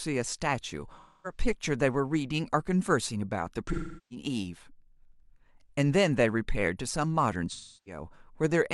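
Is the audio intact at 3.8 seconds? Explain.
No. From 3.72 to 4.25 s, AAC frame loss with concealment replays the last good spectrum, which smears, fades toward silence and returns gradually, unlike a hard-edged dropout.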